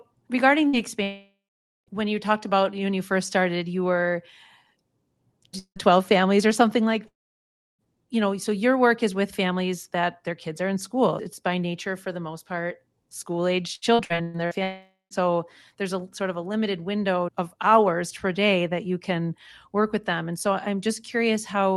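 At 0.67 s a burst of packet loss leaves a brief held buzz or hiss, about 60 ms, before the audio picks up slightly further on. It is short enough to sound like a stumble rather than a silence, which separates it from the longer dropouts.

From 1.03 to 1.90 s the sound stretches into a fading buzz or hiss, then goes quiet for about half a second before "when you talked about", likely a long network dropout with about 840 ms lost. Shorter versions follow at 5.59 to 5.79 s and at 7.08 to 7.82 s. The latter sits between "families or something like" and "you know so" and is almost entirely silence. Another comes at 14.63 to 15.14 s. In each, the smear gives way to silence.

Between 13.75 and 14.54 s, repeated packet loss gives a choppy, robotic sound. Five short holes, the longest about 120 ms, are each patched and followed quickly by the next, so there is no sustained quiet.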